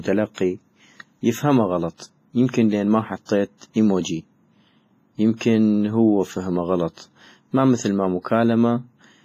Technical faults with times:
0.00-9.24 WMA compression
0.34-0.38 pre-echo
3.25-3.29 pre-echo
5.37-5.41 pre-echo

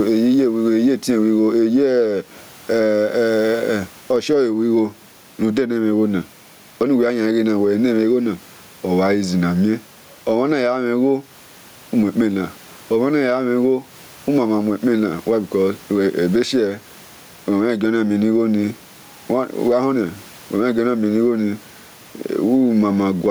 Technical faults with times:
0.00-23.31 gain pumping

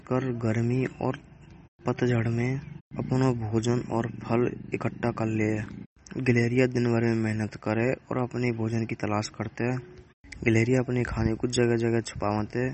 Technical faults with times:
0.00-12.73 MP3 compression

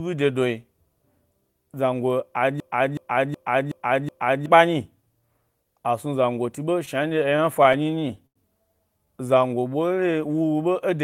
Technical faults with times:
2.60-4.46 system hang loop
6.85-8.37 repeated stalls (stutter)
8.98-10.19 jitter buffer slow-down

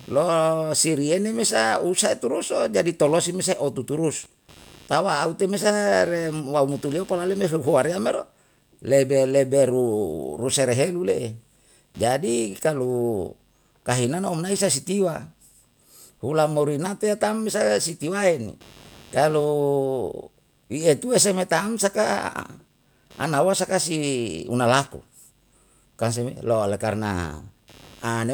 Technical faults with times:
0.00-28.33 computer activity noise

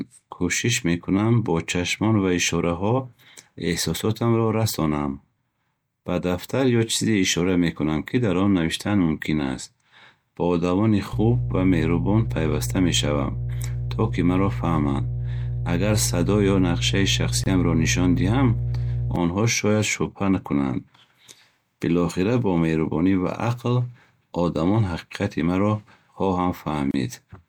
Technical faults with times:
11.13-19.16 mains hum
17.44-17.46 gap at a join of encoded pieces
26.91-26.94 gap at a join of encoded pieces

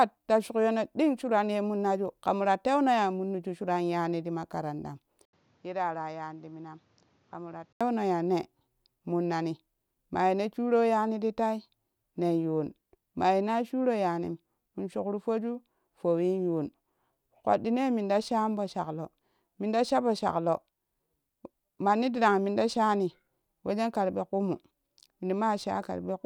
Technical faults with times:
5.25-7.81 input switched to a poorer device

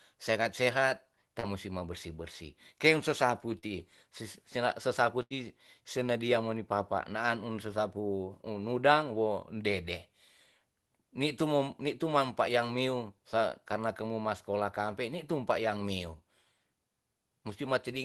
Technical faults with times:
1.39-1.46 short concealed packet loss
3.59-3.65 short concealed packet loss
5.22-5.33 burst of packet loss

